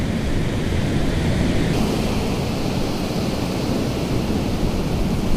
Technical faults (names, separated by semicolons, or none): section at the wrong speed